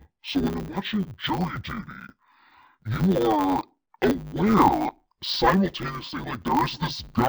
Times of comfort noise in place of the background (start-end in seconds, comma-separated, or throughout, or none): none